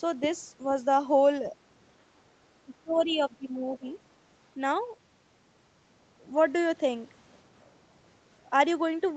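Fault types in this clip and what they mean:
Speech suppressed in double talk: from 2.64 to 3.85 s the speech dips by around 20 dB, likely the echo canceller clamping down while both ends talked.
Other side's voice leaking through: a faint second voice, well below the speech, slips in at 2.9 to 3.14 s and 3.77 to 3.91 s, likely leftover loudspeaker echo.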